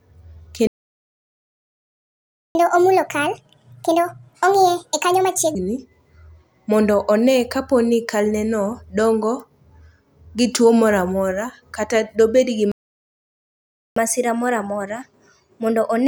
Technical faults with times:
0.67-2.55 playback stall
2.55-5.55 catch-up at higher speed
12.72-13.96 playback stall
13.96-16.07 catch-up at higher speed

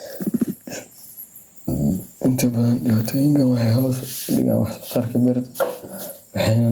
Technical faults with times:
0.00-6.71 gain pumping

